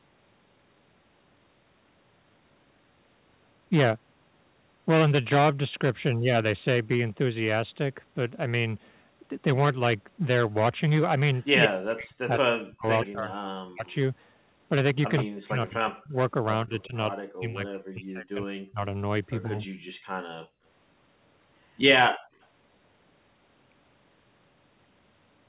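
Echo leak, 11.39 to 11.67 s: a copy of the speech returns 126 ms late at about the same level as the original, likely because a loudspeaker on one side fed the microphone and its echo canceller let the signal through. More echo follows at 13.04 to 13.94 s, about 15 dB down, and at 15.16 to 16.87 s, about 10 dB down. A faint trace, about 40 dB down, comes at 22.42 to 22.46 s.

Speech suppressed in double talk, 11.67 to 13.86 s and 15.24 to 19.58 s: with both sides talking, the canceller likely mistook the near talker for echo and pulled it down. The speech dips and breaks up, by up to about 40 dB, for roughly 1.5 s and 2 s in total.

Background gated by the echo canceller, 19.86 to 20.64 s and 22.13 to 22.39 s: the canceller clamped the microphone while the loudspeaker played. Room sound drops by about 35 dB for roughly 400 ms, then by about 33 dB for 300 ms, before returning. Through all of this the audio stays band-limited to 4 kHz, which fits the 64 kbps G.711 mu-law codec.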